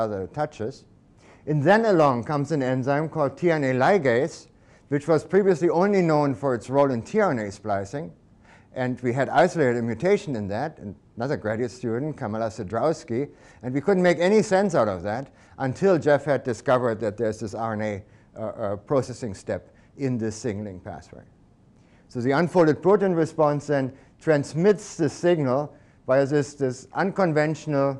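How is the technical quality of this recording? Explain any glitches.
No technical faults can be heard anywhere in the recording. There are no glitches to explain.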